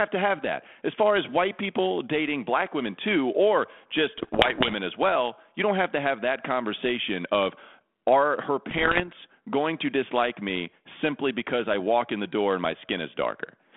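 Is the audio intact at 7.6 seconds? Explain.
Yes, the audio is intact at 7.6 seconds; the sound passes there with only the light, steady coloring of the 32 kbit/s G.726 ADPCM telephone path and its narrow band of roughly 250 Hz to 3.5 kHz.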